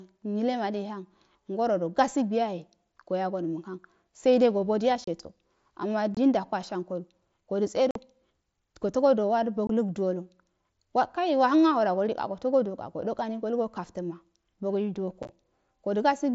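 Speech carried over an mSBC headset link, with unconcealed Bluetooth headset packet loss: lost voice packets leave abrupt silent holes of 22.5 to 45 ms at 5.04, 6.15, 7.91, 9.67 and 15.23 s, the last scattered over 60 ms.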